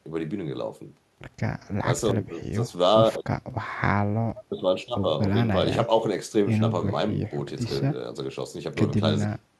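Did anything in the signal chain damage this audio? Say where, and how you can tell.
No, nothing in the chain can be heard to have damaged this speech at any stage.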